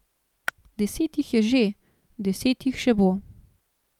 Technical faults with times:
0.48 electrical switching spike

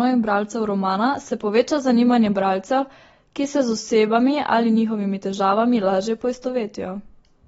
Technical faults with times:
0.00-7.48 AAC compression

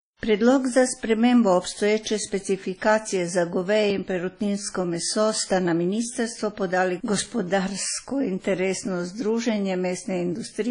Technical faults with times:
0.00-10.71 WMA compression

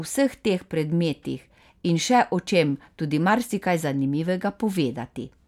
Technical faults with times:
none

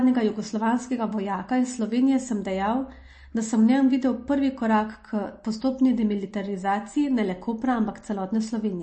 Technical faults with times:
0.00-8.82 MP3 compression

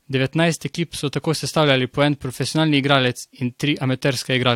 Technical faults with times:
none

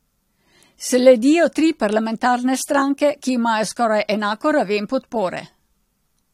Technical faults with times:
0.00-6.33 low-bitrate audio saved at a high bitrate

